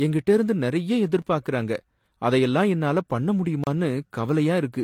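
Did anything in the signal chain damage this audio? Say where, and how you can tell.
Yes. At the codec stage, the whole clip carries two different flavours of compression smear layered together, and nothing survives above 18.5 kHz. That likely comes from transcoding between lossy codecs, Vorbis then HE-AAC, with the second encoder spending bits on the first one's artefacts.

At the driver or buffer stage there are two blocks of digital silence. One is a tick at 1.22 s, about 6 ms long, and the other is a 32 ms hole from 3.64 to 3.67 s. Each is a run of zeros, most likely where the output buffer wasn't filled in time, with an unfaded edge on each side.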